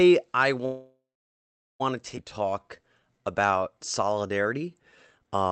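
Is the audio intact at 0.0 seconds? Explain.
Yes, the speech is intact at 0.0 seconds, with no fault at that moment beyond the ordinary band limit near 8 kHz of the call path it travelled through.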